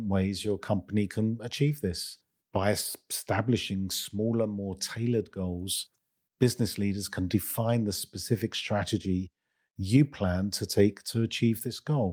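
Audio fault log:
No fault is heard anywhere in this speech clip.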